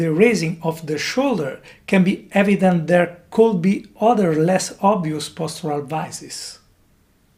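Nothing in this one trips a fault: the whole clip goes by without a single dropout, glitch or distortion to point at.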